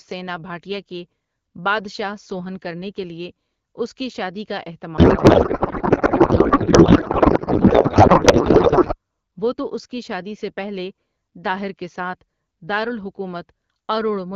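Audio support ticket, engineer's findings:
Speech replaced by garbled noise and warble barely tracking it, 4.97 to 8.94 s, after "اس کی شادی کا", clears before "وہ تو اس کی". Codec payload misread, AMR-WB depacketiser: fits octet-aligned frames parsed as bandwidth-efficient, fields taken from wrong bit positions.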